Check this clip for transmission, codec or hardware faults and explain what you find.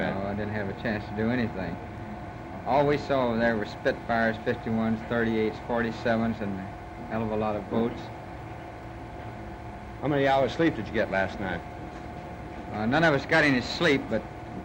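Nothing in the clip points to a transmission, codec or hardware fault.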